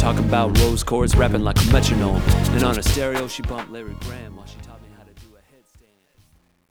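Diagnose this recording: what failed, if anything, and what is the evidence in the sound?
A digital gain or sample-format stage failed, with truncation distortion on a fade. From 2.69 s the fade-out turns grainy. From 4.29 s to the end the grit is at its worst. The gain stage dropped low bits without dither, which fits about 10-bit resolution.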